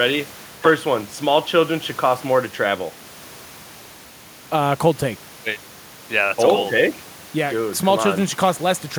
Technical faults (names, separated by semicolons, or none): none